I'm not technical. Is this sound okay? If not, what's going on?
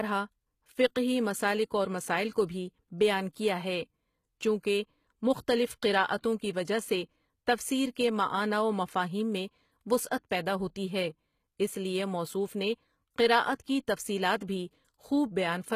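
No. Throughout, the s sounds and the top end of the speech come across gritty, metallic and lispy, with nothing at all above about 14.9 kHz. This is likely HE-AAC compression, which rebuilds the treble from copied lower sounds instead of keeping the original.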